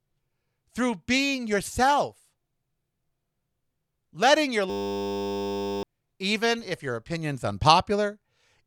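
Right after "letting your", at 4.70 s, the audio locks into a system hang loop that runs until 5.83 s. Something froze upstream while the sound hardware kept replaying the same 10 ms slice of its ring buffer, over a hundred times. At that length the repetition fuses into a steady 100 Hz buzz rather than a stutter, and about a second of real speech is simply gone before it picks up at "even if your opinion's".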